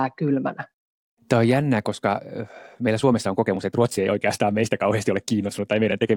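Speech, with a time-stretched section from 1.71 s to the end. At that point the pace jumps abruptly to about 1.53 times the earlier speed. The pitch does not rise with it. The sped-up part sounds rushed. The likely cause is software squeezing this part to fit a shorter length. It keeps the pitch by dropping short segments instead of simply playing faster.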